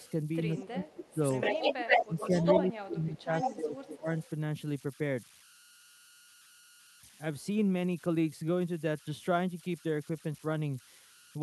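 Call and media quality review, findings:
Converter idle tones throughout: faint whistle around 1.5 kHz, about 25 dB below signal, grainy under quiet passages. Undithered delta-sigma converter pattern tone.

Echo leak at 0.00–0.10, 0.58–0.64, 0.89–2.71, 3.18–3.57, 4.20–4.25 s: delayed copy, 175 ms early, then 122 ms, from faint to slightly louder than the speech. Likely incomplete echo cancellation at the loudspeaker end; a discrete repeat, not reverberant smear.

Speech suppressed in double talk at 0.55–1.17, 2.03–2.21, 2.60–4.09 s: talker dips up to roughly 25 dB while the other side speaks. Likely echo canceller attenuating both; gain drops only during overlap, unlike packet-loss gaps.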